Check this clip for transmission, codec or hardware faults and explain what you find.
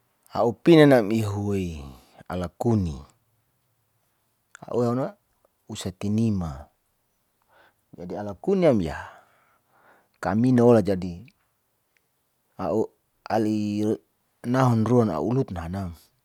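No transmission, codec or hardware faults are audible anywhere in this speech recording.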